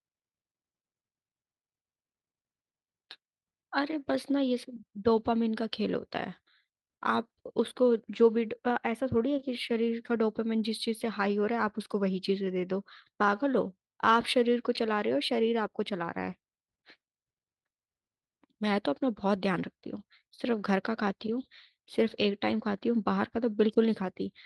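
No technical faults can be heard anywhere in this recording.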